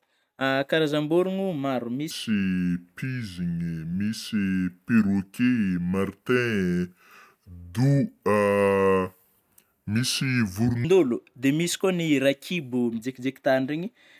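Wrong sample rate from 2.11 s to 10.85 s: the speech runs at 0.726 of its proper speed and drops 5.55 semitones, sounding low and dragged. This fits 44.1 kHz audio played back at 32 kHz without conversion, so pitch and tempo fall together.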